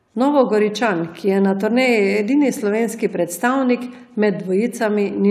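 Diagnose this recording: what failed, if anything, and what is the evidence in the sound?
Nothing failed here: I can't hear anything going wrong anywhere in the chain on this bit of speech, so there's no fault to diagnose.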